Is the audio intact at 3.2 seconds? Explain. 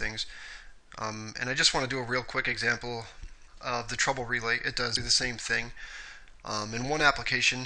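Yes, the audio is intact at 3.2 s, with no dropout, click, distortion or other fault at that moment.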